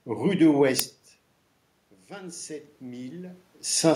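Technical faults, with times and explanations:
0.79 s, uninitialised buffer: a sharp crack, about 3 ms long, which fits a 128-sample block played before any audio was written to it.
2.07 to 3.48 s, automatic gain rising: the input fell by about 15 dB, so the gain control crept up about 5 dB, swelling the voice and room noise together.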